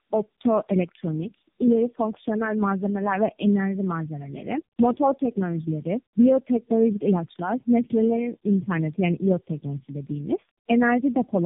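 Throughout the speech, tandem speech coding: the sound points to four passes through a narrowband AMR-type coder, each re-encoding the last one's decoded output, so errors compound into rough, muffled, warbly speech. A spectrogram shows nothing above 3.7 kHz and smeared, unsteady harmonics.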